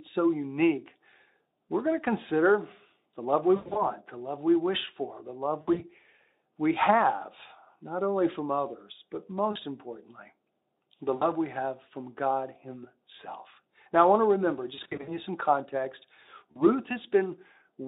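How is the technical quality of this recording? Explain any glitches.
The speech is marred by six dropouts where VoIP packet loss was concealed by the speech codec. They fall at 3.56 to 3.89 s (after "consider the love we", before "the love we wish"), 5.61 to 5.84 s (after "wish for the love"), 9.51 to 9.57 s, 11.15 to 11.31 s (before "we have from"), 14.75 to 15.20 s, and 16.52 to 16.65 s.

Missing packets, up to 160 ms in total and in runs up to 100 ms, forced the Speex-style decoder to extrapolate. The voice smears into a buzzy tone or a coloured noise that fades, and stays weak briefly after packets resume. Between these gaps the narrow phone-like band of the Speex codec can be heard.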